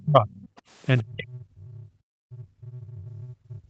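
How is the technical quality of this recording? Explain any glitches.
The quality is poor, with two recurring faults around echo cancellation, heard over call audio whose content stops near 8 kHz, consistent with an Opus call codec.

Other side's voice leaking through appears at 0.0–0.05 s, 0.29–0.61 s and 0.98–1.02 s. A faint second voice sits roughly 30 to 35 dB under the speech, likely residual loudspeaker echo the canceller missed. On a spectrogram it shows as weak, separate harmonic traces.

Speech suppressed in double talk occurs at 0.03–0.28 s, 1.01–1.9 s and from 2.25 s to the end. The speech sinks by up to roughly 30 to 40 dB, likely because the canceller muted both sides together. The waveform shows deep, abrupt dips.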